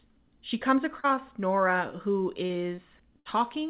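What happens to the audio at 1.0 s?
At 1.0 s, running to about 1.06 s, there is a short concealed packet loss: roughly 40 ms of speech arrived too late, and the receiver filled the gap by extending the preceding sound before blending back. Unlike a hard dropout, there is no silence or click, only a brief smear.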